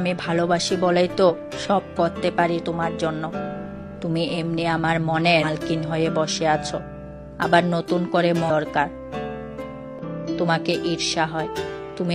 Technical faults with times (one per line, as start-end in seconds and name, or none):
1.26-1.32 damaged data in a compressed stream
5.39-5.44 damaged data in a compressed stream
8.46-8.50 damaged data in a compressed stream
9.99-10.04 damaged data in a compressed stream
11.43-11.48 damaged data in a compressed stream